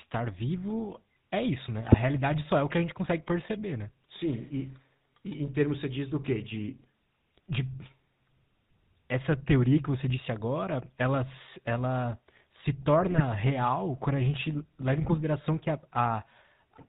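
Right from the start the whole thing has that GSM full-rate codec sound, which fits the old 13 kbps coder. Nothing comes through above 4 kHz, and the pulse-driven vocal-tract model leaves the speech plainly buzzy and gravelly all the way through. On top of that there are short bursts of GSM bit errors at 1.86–1.97 s, 6.22–6.31 s, 13.02–13.21 s and 15.02–15.17 s. Corrupted filter, pitch or gain values bend the spectrum and jolt the level, so each one squawks, pops or gargles for a few frames.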